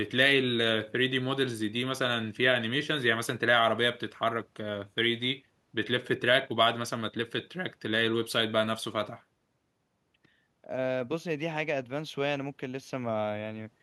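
Speech recording; no technical faults detected, nothing to flag.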